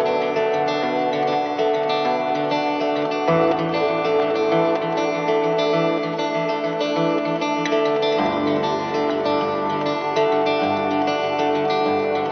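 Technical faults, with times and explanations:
No technical faults detected anywhere in the audio.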